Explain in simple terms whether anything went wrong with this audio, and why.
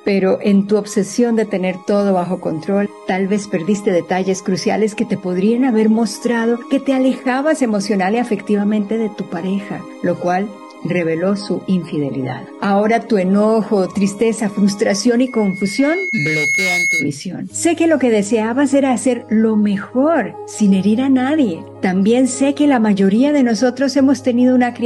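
From 15.27 to 17.15 s there's loudspeaker feedback squeal: the mic picked up its own speaker, so a 2.2 kHz tone swelled until it was as loud as the sound itself.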